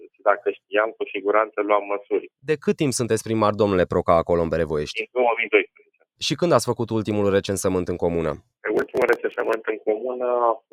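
Between 5.76 and 6.04 s the audio suddenly sinks, dipping by as much as about 17 dB before recovering, with roughly 150 ms of that stretch audibly pulled down. This is sound cut by the noise suppressor: the processor mistook part of the wanted signal for background noise and applied heavy gain reduction to it, so the affected sound loses level instead of passing through intact.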